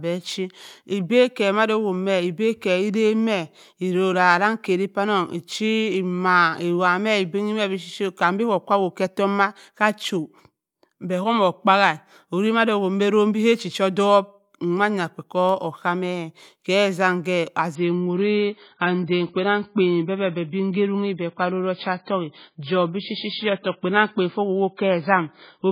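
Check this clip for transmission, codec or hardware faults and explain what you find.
There is one transmission fault. From 17.75 s to the end, the speech suddenly turns dull and swirly, with nothing above 5 kHz. This is an adaptive stream at a lower bitrate: a slowed connection made the stream switch, with no gap, to a much lower-bitrate version that sounds like 16 kbit/s MP3.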